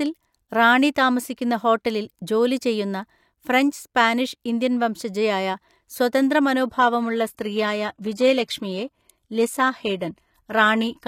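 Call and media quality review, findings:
Adaptive stream at a lower bitrate from 6.61 s to end, after "സ്പാനിഷ് ഇന്ത്യൻ വംശജയായ സ്വതന്ത്ര": abrupt gapless quality drop, treble synthetic, nothing above 14.9 kHz; fits an AAC-LC 96 kbit/s to HE-AAC 20 kbit/s switch.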